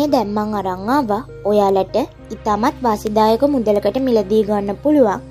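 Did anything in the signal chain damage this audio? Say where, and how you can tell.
Yes. The damage happened on a digital link between devices. Word clock ticks run from 0.32 s to 5.13 s, about one every fifth of a second. The receiver wasn't locked to the sender's clock, which was off by roughly 100 ppm, so each slip dropped or repeated one sample.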